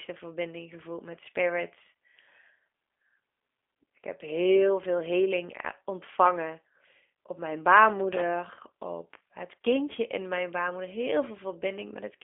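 Throughout the speech, the signal passed through a G.729 codec, which fits an 8 kbit/s link, rebuilding each frame from a vocal tract model and a few pulses. Only about 250 Hz to 3.5 kHz survives, nothing above 3.6 kHz, leaving plainly audible roughness and a synthetic edge.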